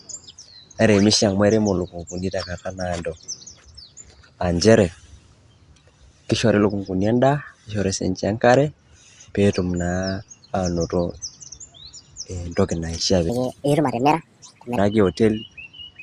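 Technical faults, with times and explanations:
13.29–14.78 s, wrong sample rate: the speech turns high and hurried, running 1.45 times too fast and about 6.5 semitones sharp, which fits 22 kHz material played at 32 kHz. On a spectrogram, harmonics and formants jump upward and syllables compress horizontally.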